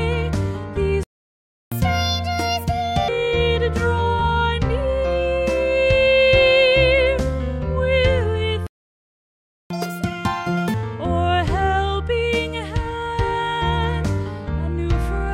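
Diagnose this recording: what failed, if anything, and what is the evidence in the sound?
Playback stall at 1.03 to 1.72 s and again at 8.67 to 9.70 s. The sound cuts out in mid-flow for about 0.68 s the first time and about 1.04 s the second, then resumes. This is a playback-stage fault. The player's output buffer most likely ran dry, or its audio thread was blocked, so nothing reached the output until data arrived again.

Catch-up at higher speed follows each stall, from 1.72 to 3.08 s and from 9.70 to 10.74 s. The first passage runs at 1.5 times normal speed, raising the pitch by about seven semitones. The second runs at double speed, about ten semitones up. Both then drop back to normal. The player is resampling its backlog to recover the lost time, so speed and pitch rise together rather than the tempo alone.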